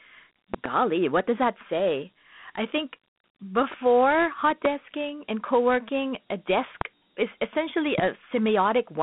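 Throughout, the speech carries the plainly audible grit of Dialogic VOX ADPCM, which fits 32 kbps 4-bit coding: the spectrogram shows a 200 Hz to 3.5 kHz band, empty above 3.8 kHz.

From 0.54 to 0.68 s, just before "what does that say", a loud pop arrives as two sharp clicks, likely a plug, switch or static discharge. Each is a tall spike around 20 dB above the speech waveform.

Single pops of the same kind follow at 4.65 to 4.68 s, at 6.81 to 6.84 s between "and co working a" and "is essentially", and at 7.99 to 8.01 s right after "is essentially". Each shows as a brief vertical stripe across the spectrogram while the speech continues underneath.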